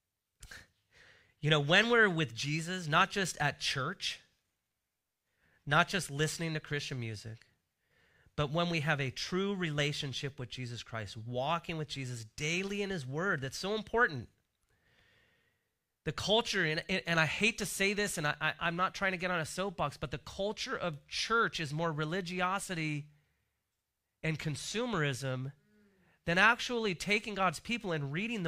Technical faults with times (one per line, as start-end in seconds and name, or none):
none